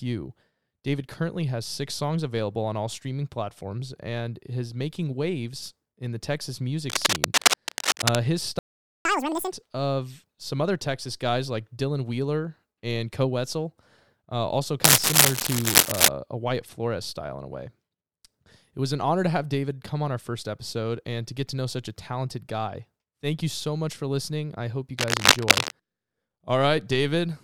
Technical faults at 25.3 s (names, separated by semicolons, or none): cable scratch noise